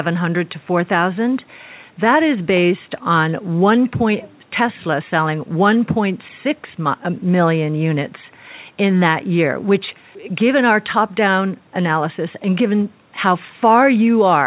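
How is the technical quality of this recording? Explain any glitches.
The technical quality of this recording is sound, with no glitches to explain.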